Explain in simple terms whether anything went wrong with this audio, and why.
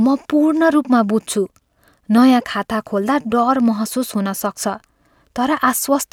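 Nothing went wrong with this speech recording; there are no technical faults to point to. Every part of it sounds as it should, with nothing broken, missing or out of place at any moment.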